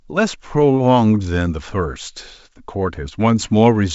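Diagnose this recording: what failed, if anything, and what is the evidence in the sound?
Nothing stood out on listening to this speech recording, which comes through the G.722 wideband telephone path at 64 kbit/s with at most a faint trace of that coding.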